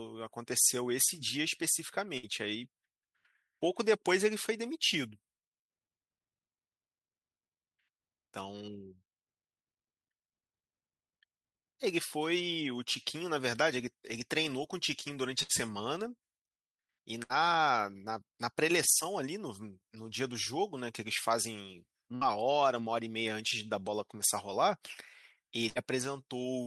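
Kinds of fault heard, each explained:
Burst of packet loss: at 2.17, 15.43, 17.23, 22.15 and 25.69 s a run of audio failed to arrive in time, so the receiver extended the last sound for about 55 to 66 ms while fading it, then jumped ahead, losing about 60 ms of speech each time. A spectrogram shows a smeared, repeating band that dims before an abrupt change. The waveform shows a decaying repeated pattern ending in a discontinuity.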